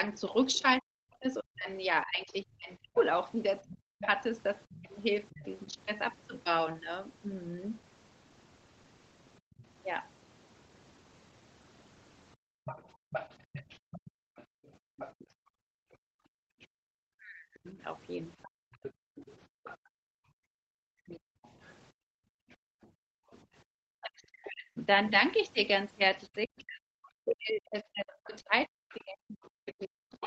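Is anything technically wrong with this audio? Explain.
Yes. There are three kinds of echo-canceller fault.

Other side's voice leaking through: from 0.13 to 5.4 s, 9.57 to 23.38 s and 26.6 s to the end, a faint second voice sits roughly 15 to 25 dB under the talker. It is likely residual loudspeaker echo that the canceller did not remove.

Speech suppressed in double talk: from 0.8 to 5.79 s and from 15.7 s to the end, the talker dips by as much as about 40 dB and breaks up. The likely cause is the canceller clamping down while both sides speak at once.

Background gated by the echo canceller: between 9.4 and 23.7 s, the room sound drops out, by up to about 36 dB and for roughly 5 seconds in total. The canceller pulls the microphone down while the loudspeaker plays.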